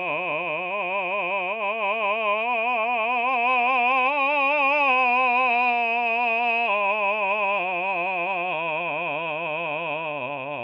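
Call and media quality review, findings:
Nothing to flag on this music clip; listened through and it holds up fine with no issues to log.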